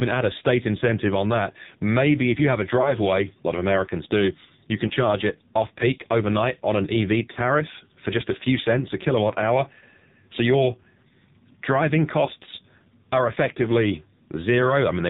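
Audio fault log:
throughout, AMR narrowband mobile codec: Speech is cut off sharply at 4 kHz and heavily degraded, with a buzzy, synthetic tone, which fits one of AMR-NB's lowest modes, around 6 kbps. A pulse-driven vocal-tract model rebuilds each frame from very few bits. A plain low-pass filter would only dull the sound, but this codec also adds the artificial buzz.
2.82–2.95 s, 4.88–4.93 s, 7.32–7.39 s, 12.26–12.29 s, lost AMR speech frames: Each is a brief dip or warble, between "if you have a" and "a lot of", between "do you can" and "charge it off peak", just before "for just a few", and once more near 12.3 s. The decoder repeats the last pitch and vocal-tract settings at falling gain, so the sound is stretched and fades rather than stopping abruptly. The 7.32 s event spans two frames and sags further.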